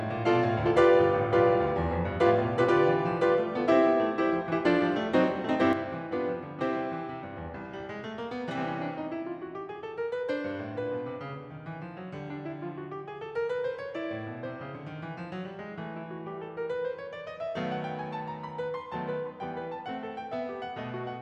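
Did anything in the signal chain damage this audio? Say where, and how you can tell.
Yes. At 5.73 s the music drops abruptly by about 6 dB and stays down to the end of the clip, with no fade or recovery. That is the signature of one channel dropping out ahead of a mono sum: material common to both sides loses half its contribution, and anything carried only in the lost side vanishes. The cause is likely an analogue wiring fault, such as a failed cable or connector on one leg of the stereo pair.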